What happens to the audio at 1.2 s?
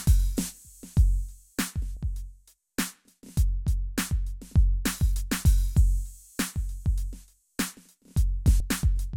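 Nothing goes wrong at 1.2 s: the music plays through that moment intact, with no dropout, click, glitch or other audible fault.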